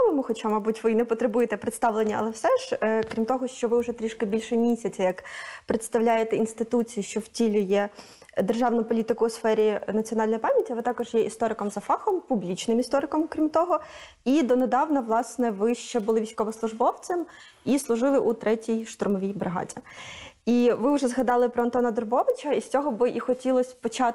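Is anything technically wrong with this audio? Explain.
Yes. Throughout the clip there is a resampler restarted on every block. The audio was converted from 24 kHz to 48 kHz in 100 ms blocks, each processed in isolation, so the interpolation filter lacked true neighbouring samples at every boundary. The result is a faint tick repeating at 10 Hz, heard only while sound is present. A spectrogram shows thin broadband vertical lines every 0.1 s, and the waveform shows small discontinuities at those same regular points.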